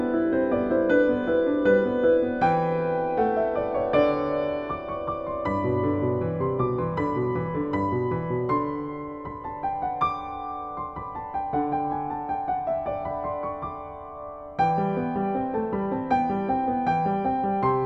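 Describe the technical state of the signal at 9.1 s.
At 9.1 s the signal is intact, with no audible dropout, distortion, noise burst or other fault at that point.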